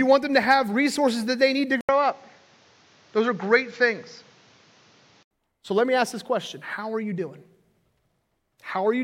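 Speech in which, just after "that they need to", the sound drops out for 80 ms at 1.81 s and returns duller, with nothing above 7.4 kHz and a faint new noise floor well below the speech at the same level, until it clears at 5.31 s, likely an input switched to a poorer device.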